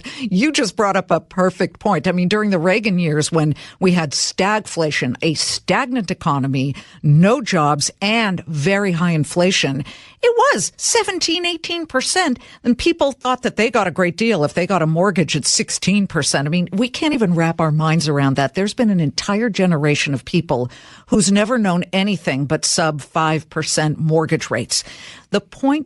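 Throughout, the speech carries plainly audible coding damage, likely from Bluetooth LC3 compression at about 48 kbps, leaving a grainy, breathy edge on the upper frequencies. Lost LE Audio frames follow at 13.22 to 13.25 s, 17.13 to 17.15 s, and 21.14 s: the decoder replays the last spectrum with scrambled phase, leaving brief noisy smears of 30, 20 and 10 ms.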